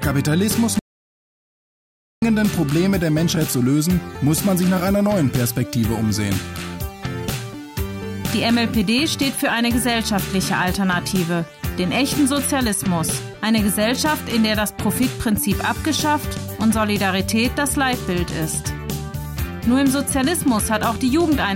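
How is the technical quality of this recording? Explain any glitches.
There's one real glitch, right near the start. From 0.79 to 2.22 s you get an audio dropout to silence: about 1.4 s of silence, with no room tone at all. The input was likely lost while the recorder kept writing, so whatever happened there is gone.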